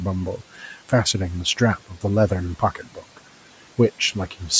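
A speech recording where parts of words sound swallowed and faint between 0.38 and 0.91 s (about 8 dB down) and between 2.59 and 3.18 s (about 11 dB): speech cut by the noise suppressor, which mistook those quiet stretches for background and turned them down.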